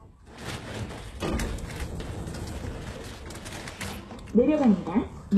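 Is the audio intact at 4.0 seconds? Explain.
No. At 4.0 s, as across the whole clip, the audio shows the marks of HE-AAC compression, likely at a very low bitrate around 16 kbps. The codec keeps only the lower spectrum and synthesizes the treble by copying lower bands upward under a coarse envelope, so the top end is a rebuilt imitation that stops near 12.3 kHz. The damage is plainly audible: high detail sounds gritty and metallic rather than natural.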